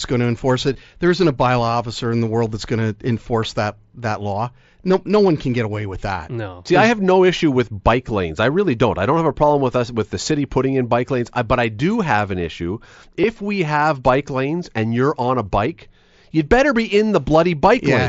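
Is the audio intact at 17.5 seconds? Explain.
Yes, the speech at 17.5 seconds is intact, with no fault at that moment.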